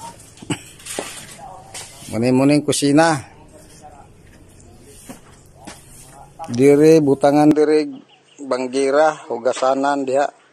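At 7.51 s the sound abruptly loses its top end, with nothing above 8.6 kHz, drops roughly 5 dB in level and gains a faint new noise floor well below the signal, with no gap. This is likely an input switched to a poorer device.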